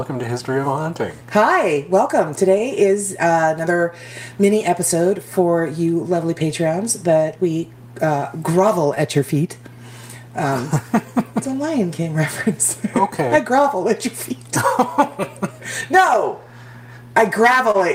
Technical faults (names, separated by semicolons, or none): clock drift between sender and receiver; repeated timing corrections; short stall from a late packet